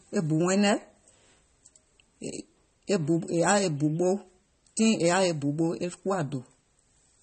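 From start to finish, the speech carries what is likely MP3 compression at a starved bitrate, about 32 kbps. The encoder sheds everything above 8.4 kHz and drops weak frequency lines frame by frame, leaving a dull top end with plainly audible watery, swirling artefacts.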